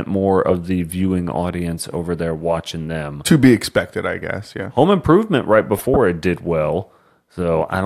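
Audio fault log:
5.76–5.97 s, corrupt frame decoded: a chirp or burst of noise lasting about 0.21 s, ending just before "it did". Damaged bits in the compressed stream were decoded without being concealed, so misread gains and codes placed energy at unrelated frequencies. Its length fits a run of roughly seven consecutive bad frames, each one adding its own stretch of wrong spectral content.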